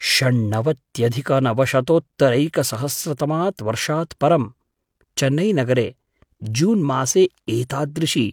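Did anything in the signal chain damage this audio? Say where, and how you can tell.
No, no damage is audible.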